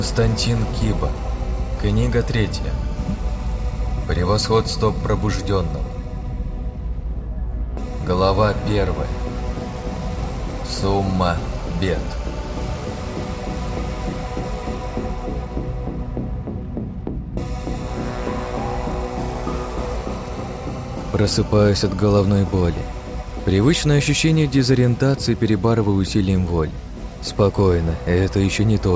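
There are no technical faults to describe in this audio, which comes through a wideband call path with nothing above 8 kHz.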